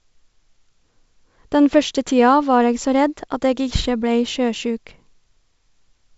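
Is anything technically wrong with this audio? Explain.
No, nothing's wrong here: it's ordinary speech carried over G.722 wideband telephone coding at 64 kbit/s, which keeps the sound open up to about 7 kHz with at most a faint trace of the codec's light upper-band hiss.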